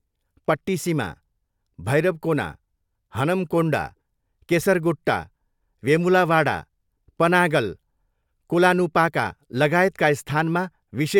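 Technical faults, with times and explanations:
Nothing stands out here: the speech comes through without any technical faults to point to.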